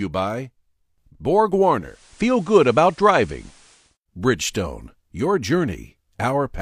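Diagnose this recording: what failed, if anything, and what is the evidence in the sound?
Digital radio blending to analogue from 1.78 to 3.98 s, at the broadcast reception stage. Over a 276 ms crossfade, the receiver lost the digital stream and fell back to FM: faint hiss appears well below the speech, and level shifts by about 3 dB.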